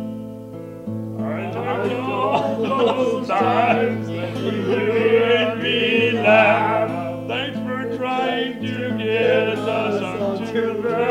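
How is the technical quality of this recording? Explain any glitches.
The technical quality of this recording is sound, with no glitches to explain.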